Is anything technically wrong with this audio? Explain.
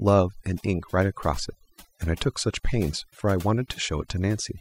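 Yes. Throughout, there's overdone noise removal: the reducer clamps bands near its noise estimate, taking quiet speech detail too, so the background twinkles.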